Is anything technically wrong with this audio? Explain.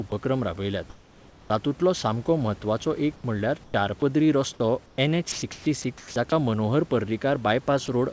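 Yes. In this speech clip, the sender's voice detector appears to switch transmission on and off, so parts of the sound and background are replaced by synthetic fill. The call path's bandwidth stops at 8 kHz.

Sound dropped by the voice detector, at 0.10–0.12 s and 7.86–7.88 s: the detector likely judged real sound to be background and stopped sending, so 10 ms and then 20 ms of sound are lost under a 20 ms patch of comfort noise. On a waveform, each shows as a brief flat, noisy notch.

Comfort noise in place of the background, at 3.16–3.24 s, 3.64–3.74 s and 4.86–4.98 s: during pauses, transmission likely halted and the receiver synthesised noise shaped like the room. The detailed background turns smooth and featureless, and drops by about 2 dB, about 11 dB and about 4 dB. A spectrogram shows uniform, textureless bands.

Onset clipped by the voice detector, at 3.72–3.74 s: the detector was likely slow to notice the sound returning, so its first 20 ms went unsent and comfort noise played instead. 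The onset begins abruptly, without its soft rise.

Sound chopped by the voice detector, 5.32–6.32 s: the detector likely toggled repeatedly here, and 460 ms in total were replaced with comfort noise. The speech has two or more holes. The spectrogram shows alternating detailed and smooth patches.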